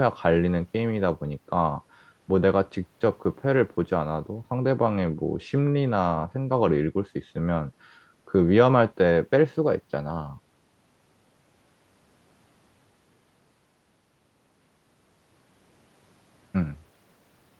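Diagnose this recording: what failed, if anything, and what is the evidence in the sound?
Nothing here has failed; the speech simply carries the expected character of a WebRTC call path, with the Opus codec's light coding texture and a top end that tails off around 12 kHz, both normal for that route.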